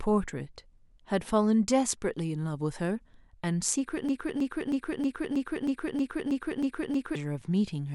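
From 4.09 to 7.16 s, a broken-record loop repeats one identical 0.32 s speech fragment ten times, unlike a varying stutter. A stalled player likely caused it.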